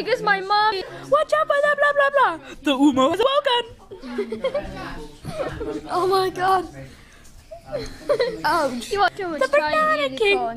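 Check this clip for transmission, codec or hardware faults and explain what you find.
Compressed frames were skipped four times, at 0.63–0.91 s, 3.14–3.23 s, 6.48–6.57 s and 8.99–9.36 s. Whole frames of the encoded stream never reached playback, either lost from the file or rejected by the decoder as corrupt, so the audio jumps forward. Roughly a third of a second vanishes at the first gap, around a fifth at the second, and about a tenth at each of the last two.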